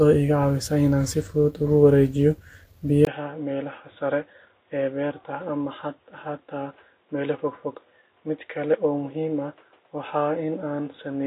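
From 3.05 s, after a 20 ms gap, the speech turns dull and quieter, cut off above 3.8 kHz, with faint background noise, likely an input switched to a poorer device.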